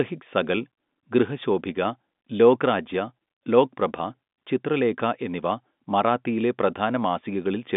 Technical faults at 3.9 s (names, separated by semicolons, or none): none